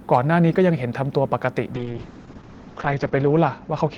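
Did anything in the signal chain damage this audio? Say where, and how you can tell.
Yes. Hard clipping hits at 0.13 to 0.18 s, at a stage in the chain that could not pass the full level. The peaks there are pushed about 2 dB past full scale and cut flat. You hear a brief crackle, because the flattened tops add harmonics high in the spectrum.

A call bitrate drop starts at 1.74 s and runs to the end. This is call processing feeding the codec. The audio turns rough and muffled as the top end falls from 20 kHz to 8 kHz. That fits a fall from about 32 kbps to about 7 kbps, with the worst stretch lasting 1.14 s.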